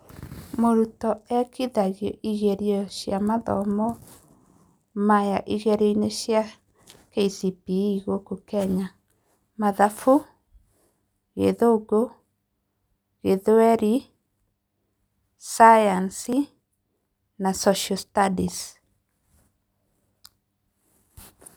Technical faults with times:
1.30 dropped buffer (overrun)
16.33 dropped buffer (overrun)

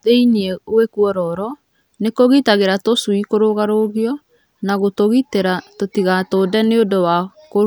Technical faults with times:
none

